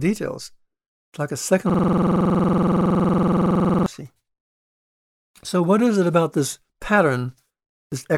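From 1.70 to 3.86 s, a system hang loop: the computer froze while the hardware kept replaying one 46 ms buffer, heard as a 21.5 Hz stuttering buzz.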